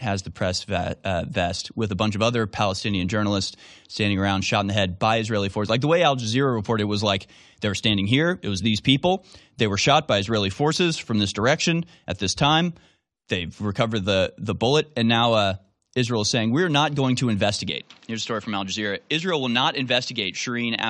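Right after "not going to", at about 17.70 s, the speech suddenly goes duller and a touch boxier, and it stays that way to the end of the clip. Everything above roughly 7.8 kHz is gone, the level drops by around 5 dB, and a new, faint noise floor creeps in well below the speech. There's no gap at the change. It sounds like the input likely switched to a poorer device partway through the recording.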